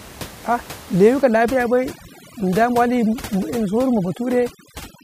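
A short speech recording carries room noise sitting about 18 dB below the talker, and from 1.22 s to the end that background collapses into near silence speckled with twinkling artefacts, the signature of overdone noise removal. An over-aggressive suppressor is pulling individual frequency bands down whenever they approach its noise estimate, taking quieter voice detail with them. On a spectrogram the floor becomes scattered isolated dots, and speech harmonics look ragged.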